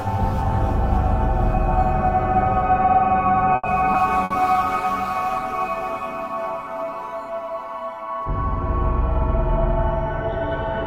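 A recording of everyday sounds with four network faults packed between 3.5 and 7.5 seconds. At 3.55 to 3.66 s the sound hangs. The last instant is drawn out for about 80 ms with a faint buzzy smear, and then it carries on from exactly where it stopped with nothing lost. That is a short stall from a late packet: the jitter buffer ran dry, the receiver stretched what it had until the packet turned up, and playback ended up about 80 ms further behind. Less than a third of a second later, at about 3.93 to 3.97 s, the opposite happens. After a 10 ms patch the sound lurches forward, and roughly 70 ms of it is simply gone, with the two sides butted together. This skip ahead is the buffer discarding audio to claw back delay, pulling latency back down by around 50 ms. From 4.13 s to 7.46 s the texture turns coarse, with a watery, grainy edge, for about 2.4 s at its worst. This is a call bitrate drop: the bandwidth estimate fell, and the encoder was throttled from 64 to 28 kbps before recovering. 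Inside that degraded stretch, at 4.24 to 4.33 s, there is a brief held buzz or hiss that fades before the sound resumes further along. That is a burst of packet loss. The receiver covered about 60 ms by extending and fading the last sound, and about 60 ms of the actual audio never arrives.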